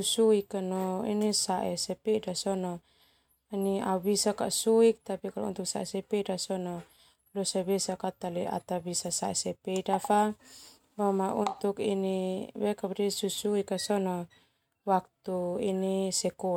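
No technical faults are audible.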